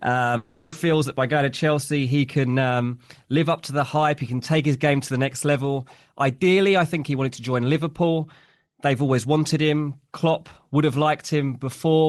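Speech clip with a long network dropout from 0.37 to 0.73 s, just before "feels that by going". For about 0.35 s the sound doesn't stop outright. It is replaced by a smeared buzz that carries the last sound forward and fades, and speech resumes with that stretch simply gone. This is likely the receiver concealing packets that never arrived. Unlike a single lost packet's brief click, it lasts long enough for the fill to decay audibly. Unlike a plain mute, no clean silent gap appears. Across the clip the top end stops around 12 kHz, which fits a call codec path.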